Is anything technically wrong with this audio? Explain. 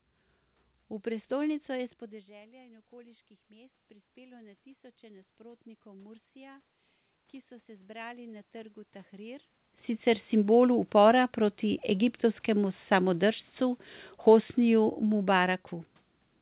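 Yes. Twice the automatic gain rises. From 2.5 to 6.71 s, between "je s" and "ki so", the input drops by about 19 dB after the talker moves away near 2 s. The gain control raises its gain by about 6 dB over four seconds, so voice and room noise swell together. Again from 7.65 to 9.5 s, just after "ki so", the gain climbs by about 4 dB, lifting the background along with the voice.

Automatic gain falling occurs from 12.5 to 15.57 s. Judging the input too loud, or its background noise too strong for the gain it started with, the control pulls its gain down by about 3 dB, so the voice and its background sink together gradually.

Throughout, nothing is heard above 4 kHz, which fits a narrowband G.711 call path.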